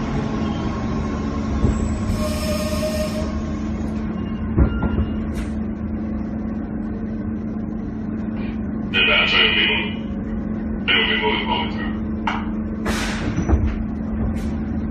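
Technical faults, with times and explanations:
No technical faults can be heard anywhere in the audio. There is nothing here that needs a time or an explanation.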